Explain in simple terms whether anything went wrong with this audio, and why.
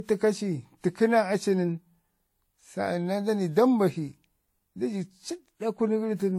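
Transcoding between lossy codecs runs through the whole clip. This speech likely went through two compressed formats in a row, which fits a WMA-then-Vorbis chain. Each pass smeared the last one's flaws and added its own. Nothing above 16.5 kHz survives.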